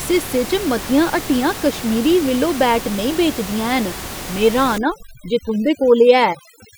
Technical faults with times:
4.78-6.78 overdone noise removal

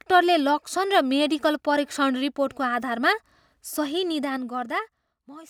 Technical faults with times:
0.00-5.50 block size mismatch (truncated)
4.06-5.27 zipper noise

